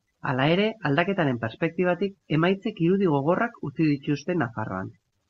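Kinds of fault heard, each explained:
No faults detected in the speech; nothing to flag.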